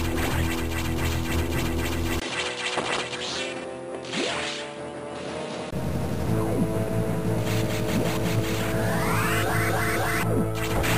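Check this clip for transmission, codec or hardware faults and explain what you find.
One fault turned up. From 2.2 to 5.73 s, the input likely switched to a poorer device: a 20 ms gap, then audio dulls above 10.5 kHz, drops about 5 dB, and gains faint background noise.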